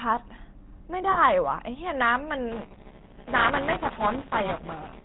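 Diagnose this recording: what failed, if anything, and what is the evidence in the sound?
The whole clip has gone through the GSM full-rate codec, which is a codec-stage problem. The speech is buzzy and gravelly throughout, with nothing above 4 kHz. That's the pulse-excited vocal-tract model at around 13 kbps flattening the fine detail of the excitation.

There are lost GSM frames at 1.12 to 1.19 s and again at 4.30 to 4.33 s, from the network or transport. Each sounds like a single 20 ms frame dropped. The decoder holds the last good frame's settings, so you hear a brief metallic ring instead of a gap.

From 2.52 s to the end there's buffer tearing in the driver or buffer stage. A robotic rattle at 200 Hz sits on the speech, which fits a 5 ms buffer period. Writer and reader have crossed, so a slice of roughly 15% of each buffer replays audio from about 15 ms earlier, with hard joins on both edges.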